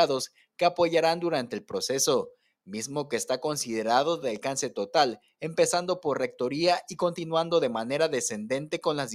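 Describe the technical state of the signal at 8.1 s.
At 8.1 s the signal is intact, with no dropout, distortion, glitch or other fault to be heard.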